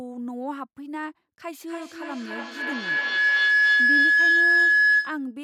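From 1.68 s to 5.36 s the speech is overtaken by feedback howl. A microphone and loudspeaker on the same call share a room, so each pass around the loop returns louder than the last. The sound narrows onto a tone near 1.5 kHz, circulating on roughly a 300 ms repeat, and climbs to about 13 dB above the speech before the clip ends.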